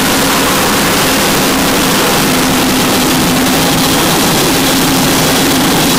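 From start to end, harsh distortion keeps quiet passages at full loudness, likely from signed and unsigned mixed up on the 8-bit samples, turning each zero crossing into a full-range jump.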